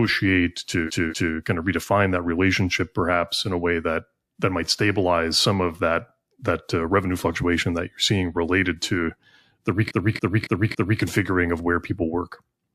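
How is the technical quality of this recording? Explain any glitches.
The recording has two stutters caused by repeated frames. From 0.86 to 1.33 s, a 232 ms block plays twice more. From 9.87 to 10.99 s, a 279 ms block plays four more times. The block lengths fit runs of about five and six compressed frames. The decoder replays each duplicated run exactly, so the sound loops. The replays add about 0.46 s and 1.11 s.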